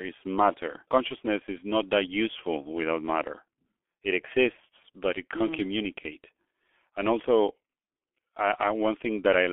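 From start to finish the speech runs through a G.723.1 codec, and it sounds it. Everything sits inside a narrow telephone band of roughly 300 Hz to 3.4 kHz, so the top end is gone and the voice comes across muffled and boxy. The codec damage is heavy: at a rate that points to about 6.3 kbit/s, the slow 30 ms frame updates smear consonants and leave a rough, hoarse edge on the voice.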